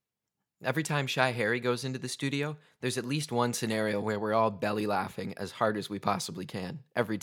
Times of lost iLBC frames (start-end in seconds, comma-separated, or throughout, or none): none